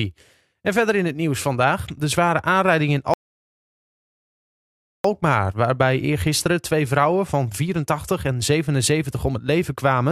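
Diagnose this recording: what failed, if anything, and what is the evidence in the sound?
The failure is a rebuffering stall at the playback stage. After "de zware aanrijding in" the speech drops to silence at 3.14 s. It resumes at 5.04 s with "waarbij eergisteren twee vrouwen", exactly where it stopped. The player ran out of downloaded audio and waited, adding 1.9 s with nothing lost.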